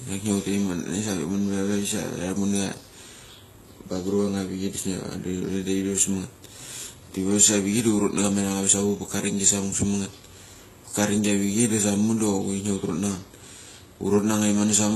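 Speech carrying two sets of codec artefacts throughout, with nothing above 12.3 kHz; likely transcoding between lossy codecs, fitting Vorbis re-encoded as low-bitrate HE-AAC.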